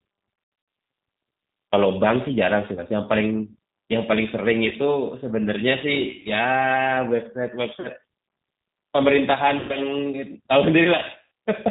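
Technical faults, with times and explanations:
Throughout, G.729 codec: plainly audible low-bitrate coding, consistent with 8 kbit/s G.729A. Nothing above 4 kHz survives, so the speech sounds muffled. Because the codec rebuilds it from a vocal-tract filter, pitch predictor and sparse pulses, the voice has a rough, slightly synthetic texture.
0.36–0.68 s, 2.75–2.82 s, 4.69–4.74 s, 6.21–6.28 s, 7.80–7.89 s, 9.59–9.75 s, 11.22–11.24 s, VoIP packet loss concealed by the speech codec: dropouts of 20 to 180 ms, the first scattered over 320 ms. The decoder extends its last pitch and filter with falling gain, giving buzzy or noisy fading stretches, and the speech stays weak or distorted briefly after each one.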